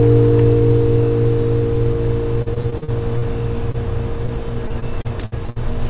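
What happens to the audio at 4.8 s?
Repeated packet loss runs from 4.68 to 5.58 s: seven gaps, the longest 60 ms, each patched by stretching the last sound, leaving it choppy and robotic.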